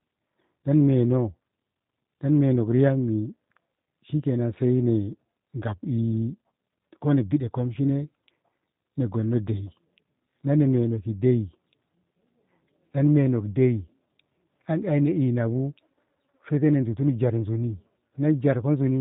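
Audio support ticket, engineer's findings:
G.729 codec artefacts across the whole clip. Speech rough, buzzy, slightly synthetic, with plainly audible coding damage. Probable component: low-rate CELP voice codec, consistent with G.729A at 8 kbit/s, rebuilding speech from a filter, pitch predictor and sparse pulses. Spectrogram: hard ceiling at 3.8 kHz, empty above. Harmonics smeared, blocky texture. Waveform: less natural fine detail.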